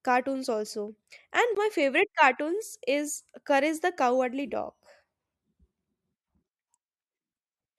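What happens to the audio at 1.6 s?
At 1.55 s the laser jumps to a different turn of the disc's spiral, a CD skip. The player mutes for a very brief instant and resumes elsewhere, so a tick and an abrupt jump in the speech come just before "my favorite cartoons is".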